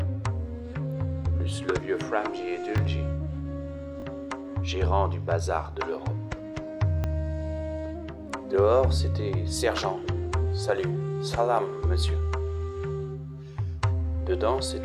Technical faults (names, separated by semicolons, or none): repeated buffer